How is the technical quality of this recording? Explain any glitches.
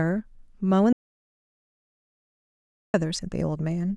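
The recording has one serious glitch, an audio dropout to silence from 0.93 s to 2.94 s. The input signal was most likely lost, leaving the recorder writing silence, so the speech cuts off abruptly into about 2 s of dead silence with no room tone before resuming mid-flow.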